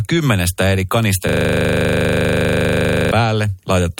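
At 1.29 s, right after "kymmenestä eri", the speech freezes into a system hang loop that lasts until 3.11 s. A single 40 ms slice of audio is replayed identically about 46 times, at a rate of 25 Hz. This is a coarse, rattling buzz with a pulse, stuck on one fragment of sound. It points to the host or driver stalling while the audio hardware kept replaying the same stale ring buffer, which fits a buffer about 40 ms long.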